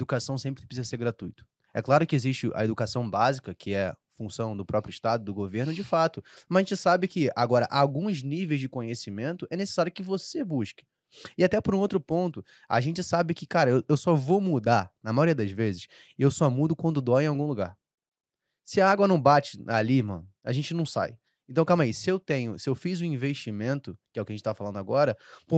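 Nothing in this speech clip stands out as a fault; it just sounds like an ordinary call, with the top end stopping around 8 kHz the way a typical call codec and microphone chain leave it.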